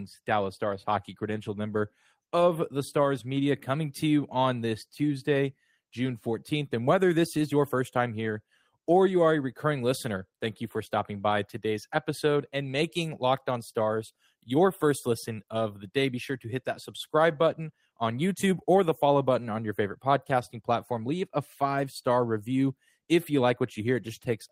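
Nothing technical stands out here, just a speech recording with no audible faults to point to at any moment.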